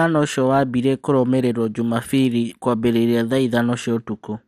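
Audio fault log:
Throughout: MP2 compression. The speech sounds dull, with a gurgly, grainy edge and nothing above 15 kHz, likely from an MP2 encode short on bits, consistent with around 80 kbps. Upper sub-bands drop out and flicker while the surviving bands are coarsely quantised.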